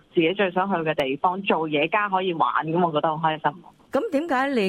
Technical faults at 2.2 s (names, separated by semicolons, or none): none